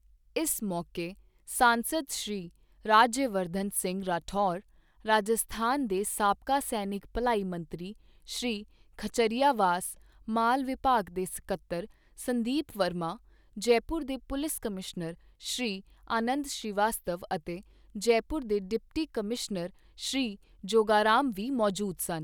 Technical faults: none

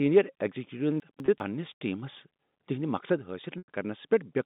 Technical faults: chunks out of order; packet loss with pitch repetition

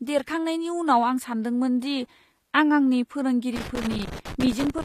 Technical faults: HE-AAC compression; loose connector crackle

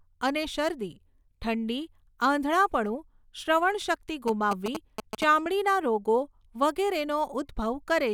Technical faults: GSM signalling bursts

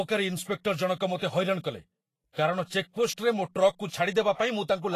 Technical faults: Vorbis compression

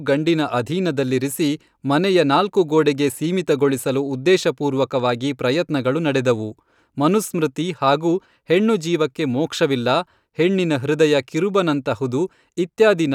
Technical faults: none

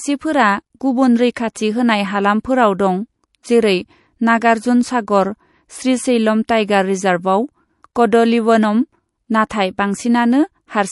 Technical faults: MP3 compression; pre-echo

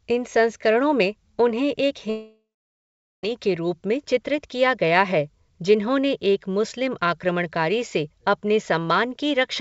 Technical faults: long network dropout

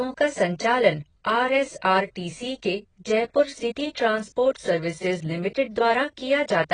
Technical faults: AAC compression

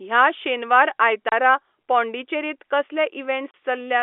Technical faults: packet loss filled with silence

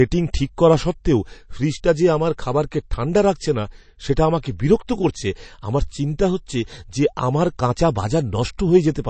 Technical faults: MP3 compression

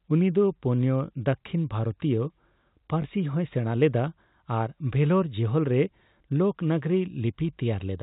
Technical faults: packet loss with last packet repeated

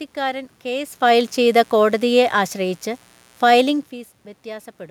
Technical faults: mains buzz; automatic gain falling

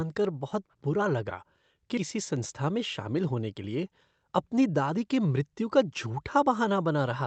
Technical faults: skip ahead; jitter buffer speed-up

